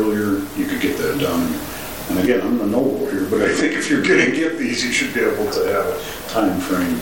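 From 2.17 to 4.78 s a Bluetooth SBC bit pool drop starves upper sub-bands: treble dulls, gritty noise rises, and the spectrogram's top goes dark.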